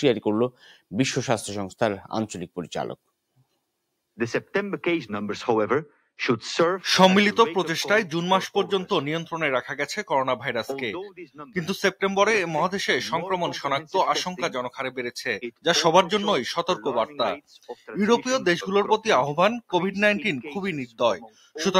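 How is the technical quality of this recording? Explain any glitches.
The noise suppressor is overreaching in three places. Sound cut by the noise suppressor shows up at 11.11–11.39 s, 17.41–17.89 s and 21.21–21.56 s. Each time it mistakes real sound for noise and pulls it down by about 15 to 18 dB for a few tenths of a second, so tails sag and thin out.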